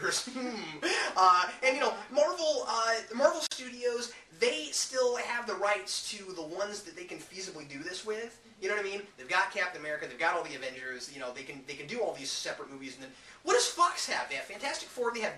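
A gap at a join of encoded pieces opens from 3.47 to 3.51 s, a gap of about 47 ms cut into otherwise continuous sound. The audio was encoded as separate pieces and then butted together untrimmed, so the encoder's start-up delay and the padding on the previous piece's final frame both remain as dead air. Its edges are smeared by the codec, and the sound resumes exactly where it broke off.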